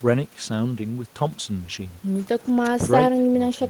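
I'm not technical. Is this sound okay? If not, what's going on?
Yes, nothing wrong is audible.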